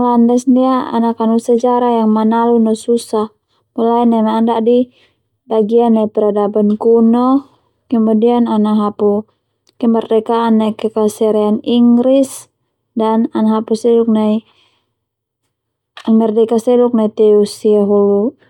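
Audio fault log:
No faults found in this speech clip.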